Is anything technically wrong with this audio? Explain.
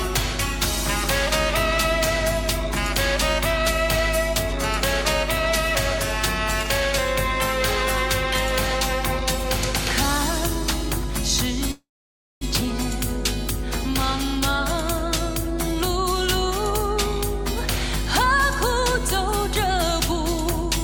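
Yes, there are two faults. Mains hum runs throughout: a steady 50 Hz tone from power-line coupling, loud, sitting only a little below the sound itself. From 11.71 to 12.44 s there is a call audio freeze. The last sound fades into about 0.56 s of silence, then resumes where it stopped, likely from late packets draining the jitter buffer.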